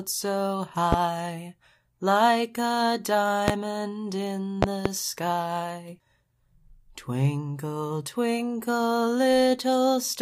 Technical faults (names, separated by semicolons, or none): loud pop